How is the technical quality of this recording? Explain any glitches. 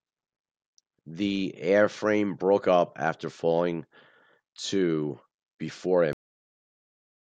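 There's one real glitch, right at the end. At 6.13 s the speech has a cut-off end: the final buffers never got written, so it stops dead mid-sound and drops straight into digital silence, no decay.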